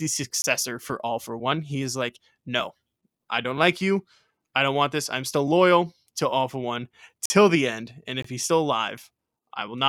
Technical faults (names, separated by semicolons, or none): block of digital silence